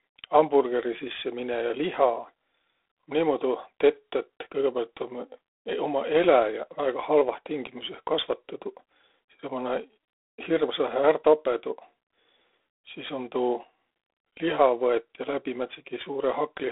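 Throughout, G.726 ADPCM coding at what sounds like 24 kbit/s starves each sample of bits, leaving speech with a rasping, level-following hiss and nothing above 3.8 kHz.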